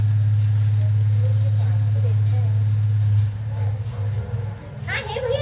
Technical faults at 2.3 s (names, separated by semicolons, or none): none